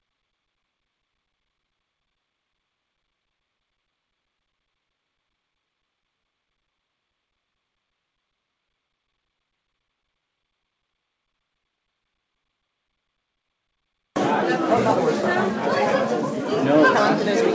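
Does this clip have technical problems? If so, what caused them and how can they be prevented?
No, nothing stood out on listening to this audio, which came through a G.722 call path at 64 kbps with nothing above 8 kHz, as that codec's normal band limit.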